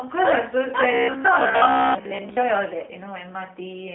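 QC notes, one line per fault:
Throughout, G.729 codec: speech rebuilt from a vocal tract model and sparse pulses sounds plainly rough and synthetic, dead above 3.8 kHz, which fits 8 kbit/s G.729A.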